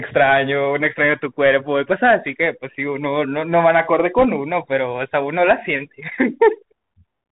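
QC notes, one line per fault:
throughout, Bluetooth CVSD headset codec: the speech stops dead at 4 kHz, and the one-bit delta coder's adapting step lags loud high content, so sibilants turn scratchy over a granular hiss, consistent with a 64 kbps CVSD link. Spectrogram: hard ceiling at 4 kHz, granular noise floor throughout.
4.18 to 4.25 s, bit errors on a Bluetooth voice link: a brief rushing crackle over the speech, fitting a bit error rate of around 2 percent. Each flipped bit shifts the step only slightly and fades, so no loud clicks. Waveform: fuzz without spikes; spectrogram: broadband smear below 4 kHz.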